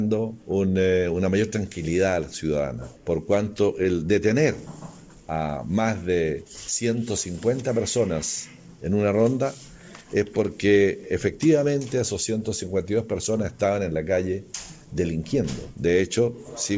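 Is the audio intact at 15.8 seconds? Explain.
Yes, at 15.8 seconds the audio is intact, with nothing there beyond the ordinary sound of the WebRTC call path, whose G.722 coding leaves nothing above 8 kHz.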